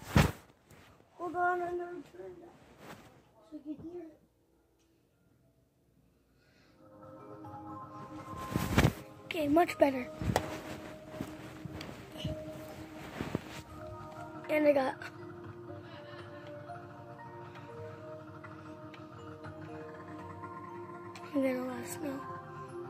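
Nothing is technically wrong with this audio.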